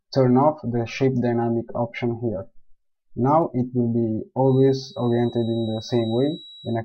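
From 4.41 s to the end, a thin feedback whistle at 3.9 kHz rings behind the sound, about 25 dB below it, slowly swelling and fading. Its likely cause is a loudspeaker-to-microphone loop at the edge of feedback. Unlike a steady electrical whine, it drifts in level, and it never builds into a howl.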